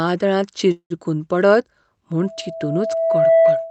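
At 0.71 s the speech stalls until 0.93 s in what sounds like a call audio freeze, most likely packets arriving late so the jitter buffer ran dry. For about 190 ms the receiver stretches the last sound into a fading buzz, ending in roughly 80 ms of silence, then the speech resumes where it stopped with nothing lost. On a spectrogram, smeared, blurred harmonics thin into a blank strip. The waveform shows a decaying tail flattening to silence before the speech returns.

From 2.20 s to the end there is a loudspeaker feedback squeal. The microphone is picking up its own loudspeaker, and at 657 Hz the loop gain has gone above one, so that tone feeds itself. It swells over roughly a second into a steady howl sitting about 5 dB above the speech. On a spectrogram it appears as a single bright horizontal line at 657 Hz that thickens as it grows. The waveform envelope rises into a dense, regular oscillation riding over the speech. 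Through all of this the Opus call coding leaves nothing above about 8 kHz.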